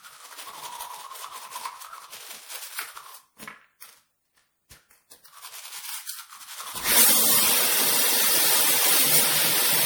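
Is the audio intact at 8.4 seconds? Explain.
No, at 8.4 seconds, like everywhere else in the clip, there's generation loss. The sound is swirly, hollow and smeared, with soft attacks, likely from around seven passes through MP3 at 96 kbit/s, each re-quantising on a shifted frame grid so the damage piles up.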